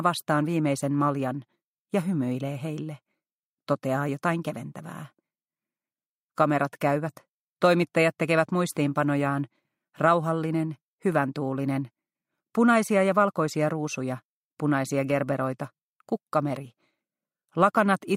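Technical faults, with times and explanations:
14.18 s to 18.17 s, resampler restarted on every block: the sample-rate converter was reset at each 20 ms block, likely a 44.1 kHz to 48 kHz conversion, so at every block edge its filter worked from silence or wrapped samples instead of the true neighbouring audio. Each boundary picks up a small error, and at 50 per second these merge into a steady 50 Hz buzz that rides on the sound and drops away wherever there is no signal.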